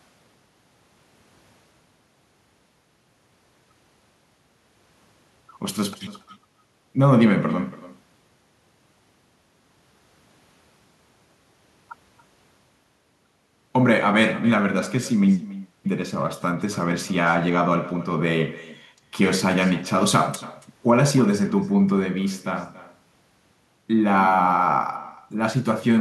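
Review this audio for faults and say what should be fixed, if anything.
Echo with no canceller runs throughout the speech, from start to finish. Every phrase returns roughly 300 ms later as a fainter copy, about 17 dB below the direct sound, and thinner. The far end is playing the call through a loudspeaker, its microphone picks that playback up, and nothing subtracts it before it travels back, so the talker hears themselves after the network round trip. To prevent it, enable acoustic echo cancellation on the far-end device or have that participant use a headset.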